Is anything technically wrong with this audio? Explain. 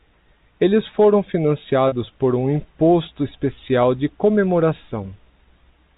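Yes. At 1.88 s to 1.92 s, packet loss with pitch repetition hits the speech. About 40 ms of audio never reached the receiver, which fits two 20 ms packets going missing. The receiver bridged the gap by repeating the last pitch period it had and fading it down. Because the loss is so short, this sounds like a brief, slightly held, buzzy sustain of the voice rather than a dropout. The G.711 telephone coding band limit still applies around it.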